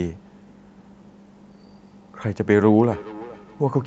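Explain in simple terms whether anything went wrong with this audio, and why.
Two devices on the same call picked up each other's playback, causing feedback echo between two devices: from 2.41 s to the end, speech returns roughly every 0.4 seconds, fainter and ringing.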